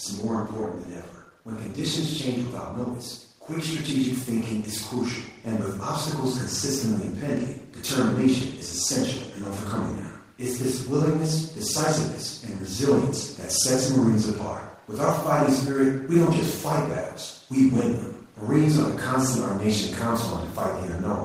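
From 0.05 to 1.2 s the automatic gain control, judging the input too loud or its background noise too strong, pulls its gain down by about 3 dB. This automatic gain falling makes the speech start loud and then sink gradually, with the background dropping along with it.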